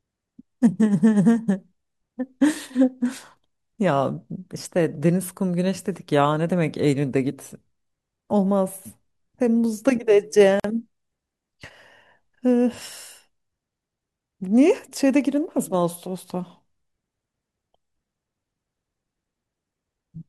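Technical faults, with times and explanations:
10.60–10.64 s: gap at a join of encoded pieces. The speech drops into a 47 ms silence with smeared edges, because untrimmed encoder delay and end padding remain at the splice.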